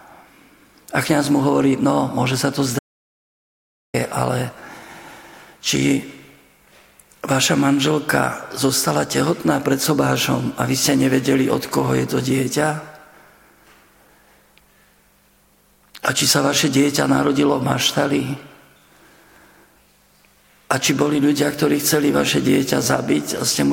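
An audio dropout to silence runs from 2.79 to 3.94 s, removing about 1.15 s. The sound cuts off mid-flow and resumes abruptly, with silence between. Unlike a natural pause, no room tone survives, which points to a likely lost input while recording continued as silence.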